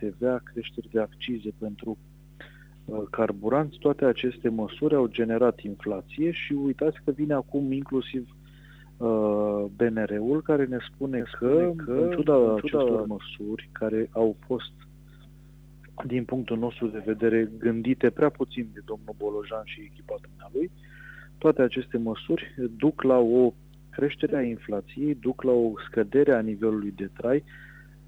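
From 11.20 to 13.08 s there is a doubled audio track. A full-band copy trails about half a second behind, about 5 dB quieter. A second capture path likely caused it.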